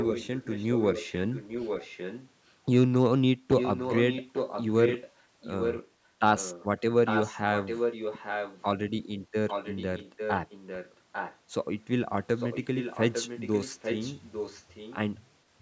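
An echo leak runs through the speech, with a delayed copy arriving 850 ms behind. It is heard from 0.0 to 2.52 s, 3.57 to 5.11 s, 5.42 to 5.89 s, 6.37 to 6.65 s, 7.05 to 8.64 s, 9.48 to 11.38 s and 12.36 to 14.97 s. It sits about 5 to 15 dB below the speech. The likely cause is a loudspeaker on one side of the call whose echo canceller let the sound back through.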